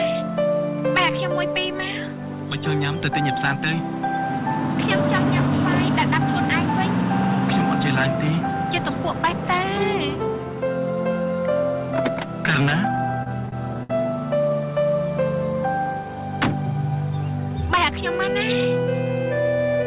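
From 12.96 to 13.91 s there are repeated stalls (stutter). Packets arrived late, so the jitter buffer kept running dry. Eight short holds stretch the last sound, the longest about 65 ms. Nothing is lost, but the audio drags and stutters.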